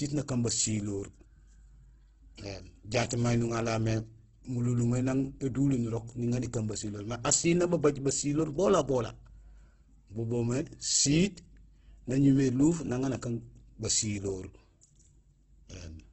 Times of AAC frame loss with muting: none

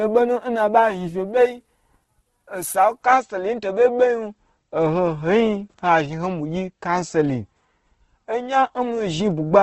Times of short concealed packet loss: none

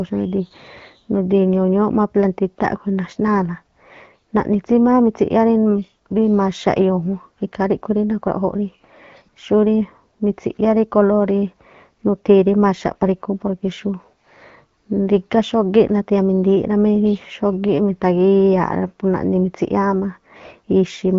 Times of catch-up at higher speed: none

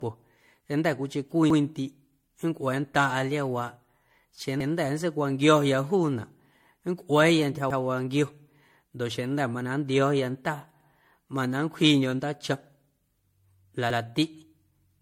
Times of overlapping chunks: 1.50-1.60, 4.60-4.70, 7.70-7.80, 10.80-10.90, 13.90-14.00

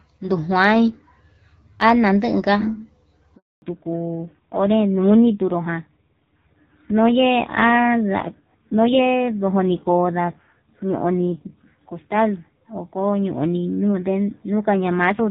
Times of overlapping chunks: none

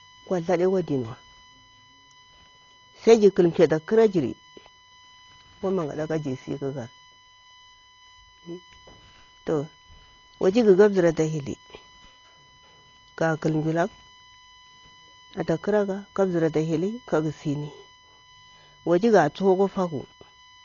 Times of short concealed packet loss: none

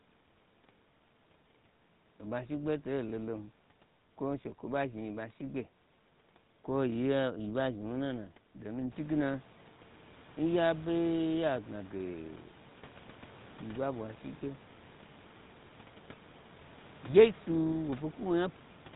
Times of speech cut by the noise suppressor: none

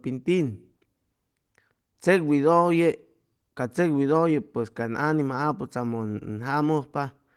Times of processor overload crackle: none

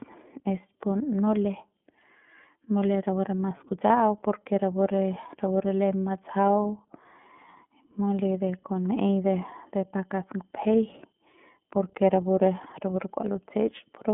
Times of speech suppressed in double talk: none

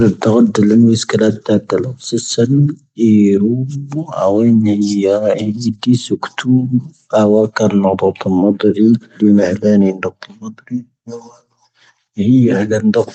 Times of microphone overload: none

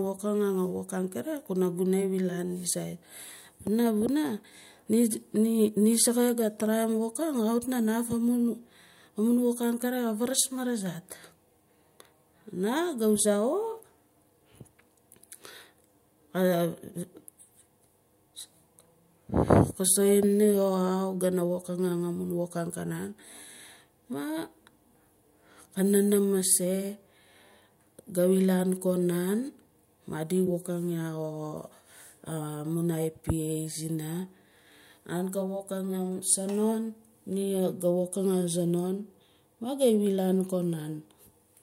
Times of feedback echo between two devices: none

